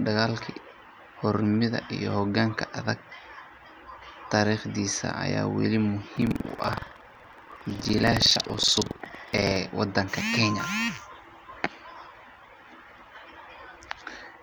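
From 6.13 s to 9.58 s the speech takes on a rough, robotic rattle at about 21.5 Hz. This is buffer tearing: the writing side and the reading side of the playback ring buffer have drifted into each other, so every period, which fits a 2048-sample buffer, carries a small slice of audio from roughly a tenth of a second earlier. On a waveform, hard discontinuities repeat at that rate. A spectrogram shows evenly spaced vertical seams through the speech.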